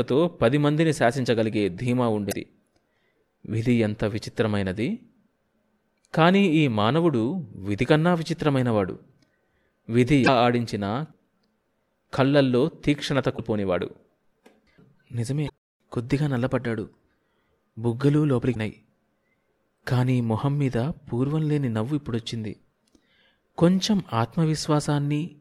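Damaged data in the compressed stream at 2.29, 10.23, 13.34, 15.45 and 18.51 s breaks the decoder's frame sync, giving 40 to 56 ms disruptions.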